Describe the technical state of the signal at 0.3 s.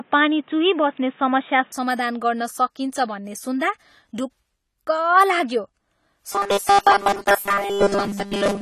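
At 0.3 s the speech sounds dull and boxy, with a level step of roughly 5 dB and a faint added noise floor. That fits an input switched to a poorer device, likely a narrowband headset or alternate microphone, which lasts from 0.0 to 1.72 s and clears without a gap.

Underneath, plainly audible smearing and fizzy texture, with everything above 14.1 kHz missing, point to AAC compression, likely AAC-LC at around 32 kbps, present throughout.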